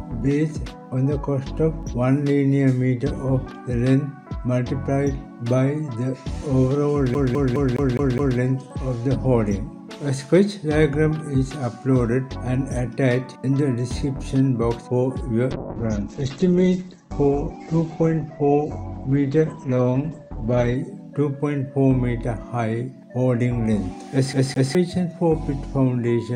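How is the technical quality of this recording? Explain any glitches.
The recording has two distinct glitches: a skipping CD stutter, heard twice, and a stretch of low-bitrate call audio.

From 7.14 to 8.39 s, and again from 24.33 to 24.75 s, the CD gets stuck on one turn. A scratch throws the laser back one track on each rotation. The same 0.21 s fragment repeats, six times and then twice, with a brief mute at each jump.

From 15.54 to 20.82 s there is a call bitrate drop. The encoder was starved of bits, which fits a fall to roughly 10 kbps, and the top end closes from 20 kHz to 8 kHz. The sound turns coarse, watery and muffled until it recovers.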